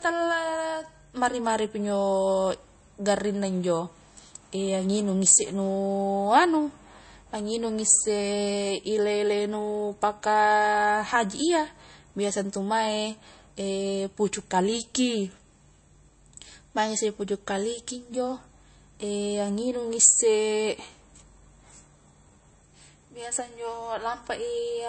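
From start to finish the speech stops dead at 8.3 kHz, a flat ceiling across the spectrogram, with smeared, watery compression artefacts. It is low-bitrate audio saved at a high bitrate, likely an MP3 near 33 kbit/s re-encoded at 192 kbit/s, which cannot restore what was lost.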